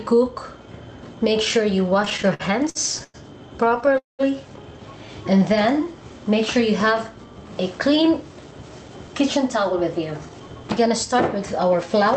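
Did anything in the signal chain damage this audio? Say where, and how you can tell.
Yes. Repeated stalls (stutter) occur at 1.93 to 3.16 s and 3.64 to 3.96 s. Late packets drained the jitter buffer. The receiver stretched the last sound across brief gaps of up to 101 ms.

A call audio freeze at 3.98 to 4.21 s inserts a 0.21 s gap, mostly silent. A network hold-up likely emptied the buffer. The sound then resumed where it stopped.

A jitter buffer slow-down at 5.05 to 5.85 s plays the sound at 94% speed at unchanged pitch. Repeated pitch periods added 52 ms to rebuild the buffer's reserve.

A jitter buffer speed-up at 7.78 to 10.65 s runs the sound at 107% speed at the same pitch. The buffer trimmed roughly 0.2 s of short pieces to cut excess delay.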